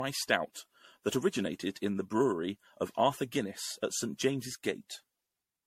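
Throughout the speech, a swirly, hollow smear and softened consonant attacks, with nothing above 16.3 kHz, point to generation loss, likely from around ten MP3 passes near 64 kbit/s. Unlike a single low-bitrate encode, the artefacts sound more compounded than that bitrate explains.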